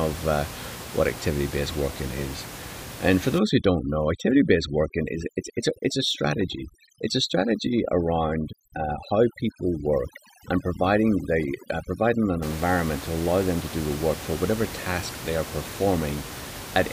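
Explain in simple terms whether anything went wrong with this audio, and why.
From about 3.39 to 12.42 seconds, the gaps between phrases drop to an unnatural near-silence sprinkled with faint twinkling specks. This is overdone noise removal: a cleanup tool was set too strong, so it switched off any slice of pitch that resembled the background hiss, and the softer parts of the voice were cut away with it. Outside that stretch, the ordinary background noise of the room can be heard under the voice.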